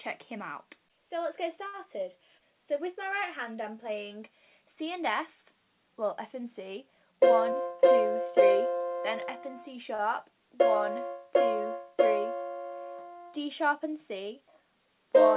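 At 1.67 to 1.88 s, a short stall from a late packet occurs. The jitter buffer ran empty, so the last sound is held about 65 ms with a slight buzz. A jitter buffer speed-up runs from 6.94 to 7.61 s. Excess buffered audio was trimmed by cutting out pitch periods. The sound runs 111% fast at the same pitch, losing about 70 ms, and feels hurried. At 9.95 to 10.02 s, a second short stall stretches the sound about 37 ms while waiting for a packet. Throughout, nothing is heard above 4 kHz, which points to a G.711 A-law call path.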